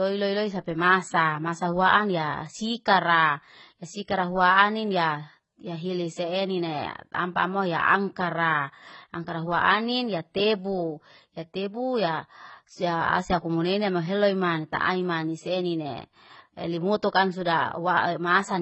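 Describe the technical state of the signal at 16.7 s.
At 16.7 s the speech carries heavy damage from AAC compression, present for the whole clip. Nothing survives above 8.1 kHz. Sibilants sound dull, smeared and fizzy. This likely comes from AAC-LC at a very low bitrate, around 16 kbps.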